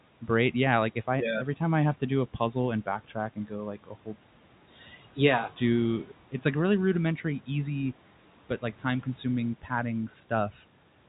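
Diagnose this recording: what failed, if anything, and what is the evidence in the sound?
Call processing failed: the noise suppressor cut speech between 3.84 and 4.16 s, mistaking it for noise and pulling it down by about 12 dB for roughly 150 ms. The waveform envelope dips abruptly, and the spectrogram shows speech energy sinking toward the background floor.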